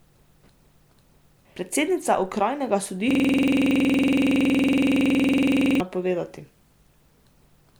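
A speech recording that, from 3.11 to 5.81 s, freezes into a rapid buzzing stutter as one 46 ms fragment repeats exactly at 21.5 Hz. This is a system hang loop: the system stalled while the audio hardware kept replaying its ring buffer, which fits a 2048-sample buffer.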